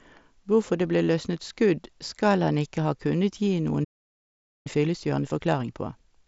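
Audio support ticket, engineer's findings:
Playback stall, 3.84 to 4.67 s, right after "ha kunnet gi": output drops to full silence for about 0.81 s mid-flow, then resumes where it stopped. Likely cause: player buffer underrun or blocked audio thread. A stall rather than a dropout in the link: true silence with no codec noise, and no sound lost.

Time-compressed catch-up, 4.67 s to end of clip: sound runs about 1.25x fast at unchanged pitch. The player is trimming its backlog by cutting and cross-fading short segments. Unlike a resample or speed-up error, pitch stays put. Bandwidth ends near 8 kHz, consistent with the mSBC headset link.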